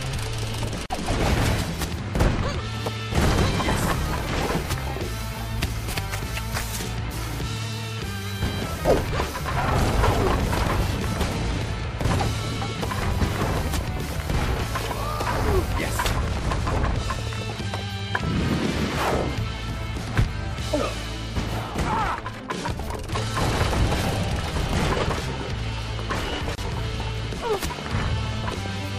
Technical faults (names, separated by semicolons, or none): gap at a join of encoded pieces